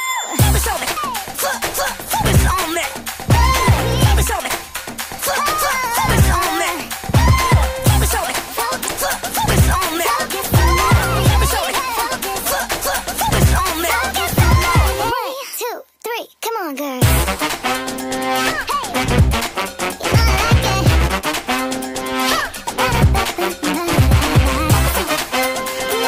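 Damaged data in a compressed stream: corrupted bytes leave the decoder misreading frames and resynchronising at the next valid header, producing a brief chirp, squawk, click or short hole in the audio at 0.93 to 0.97 s and again at 8.84 to 8.90 s, each lasting roughly 40 to 60 ms.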